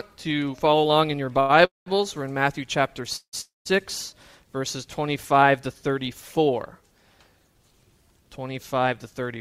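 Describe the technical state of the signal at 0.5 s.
At 0.5 s the signal is intact, with no audible fault at that moment.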